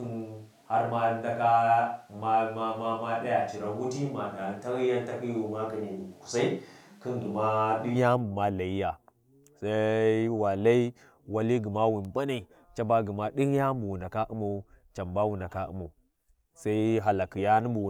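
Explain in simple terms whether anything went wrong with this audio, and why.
Something's off right from the start. Up to about 7.95 s the speech sounds roomy and hollow, with less bass, like it's being picked up from across the room. That's a switch to a distant microphone, most likely because the close mic wasn't working and a farther one, like a camera's, was used instead. Loudness stays about the same, with a faint room hiss underneath, and then it snaps back to the close, fuller sound.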